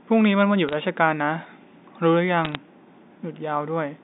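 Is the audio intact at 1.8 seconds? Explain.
Yes, the audio is intact at 1.8 seconds, with the speech coming through the G.711 telephone line band cleanly and no fault at that moment.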